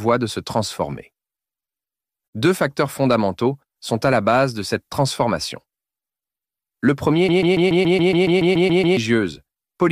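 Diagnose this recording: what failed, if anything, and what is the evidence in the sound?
From 7.29 s to 8.97 s the sound locks into a stutter: one fragment about 0.14 s long plays twelve times back to back, identical each pass, then normal audio resumes. This is a broken-record loop, and whatever should have been heard in that stretch is gone. The likely cause is a stall in the playback or streaming buffer, where the player kept re-sending the last fragment it held instead of fresh audio.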